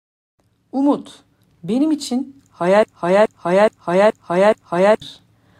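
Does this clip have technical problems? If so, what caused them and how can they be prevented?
Yes. A broken-record loop runs from 2.83 to 5.02 s. A 0.42 s piece of speech repeats five times, likely because the stream stalled and resent its last fragment. Larger buffers and stall detection that outputs silence would prevent this.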